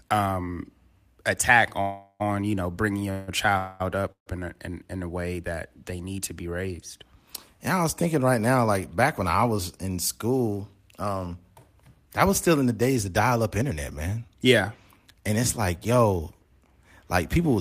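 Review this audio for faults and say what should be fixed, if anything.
Call audio freezes at 1.81–2.33 s (after "um attack"), 3.11–3.30 s, 3.58–3.82 s and 4.12–4.40 s (before "a in in a"): the last sound is stretched into a fading buzz, likely from a drained jitter buffer, then resumes without loss.

Jitter buffer speed-ups from 9.51 to 14.46 s (108%) and 15.14 to 17.59 s (106%): short pitch-period slices are repeatedly cut, shedding roughly 0.4 s and 0.15 s, so the speech sounds hurried at unchanged pitch.

A steadier network path and a deeper or more adaptive jitter buffer would prevent both the underruns and the catch-up compression that follows them.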